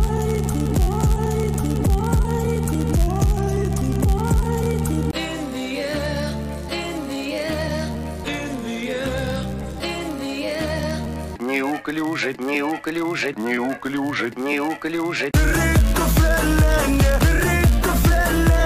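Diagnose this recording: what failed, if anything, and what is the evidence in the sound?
A block size mismatch (padded) at the driver or buffer stage runs through the whole recording. The evidence is a steady buzz at 91.5 Hz riding under the sound from start to end, with the audio running slightly slow, at 0.996 of normal speed, while its pitch stays about where it should be. One stage hands over blocks a little shorter than the next stage reads, and the shortfall is zero-filled, so a brief gap recurs at the block rate and produces the buzz.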